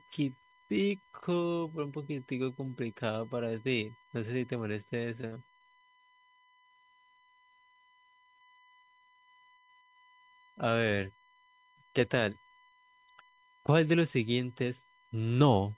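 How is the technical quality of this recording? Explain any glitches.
The recording has two faults: a steady tone under the whole speech clip and a short stretch of choppy, robotic sound. The audio has nothing above 4 kHz, as expected for a G.711 A-law call path.

USB whine runs through the entire clip as a fixed-pitch 1 kHz tone, about 30 dB below the speech. The USB bus draws current in 1 ms bursts, and that pulsing leaks into the audio through the power or ground lines, producing a constant, thin whistle.

Repeated packet loss (robotic sound) hits from 5.21 to 6.22 s. Audio packets kept going missing, with the longest hole about 46 ms. Each one was patched by stretching the preceding sound, so roughly 29% of that second is fill. The result sounds choppy, with pieces missing.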